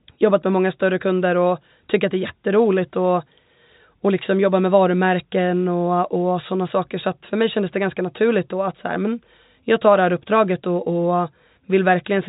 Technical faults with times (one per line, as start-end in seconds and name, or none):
none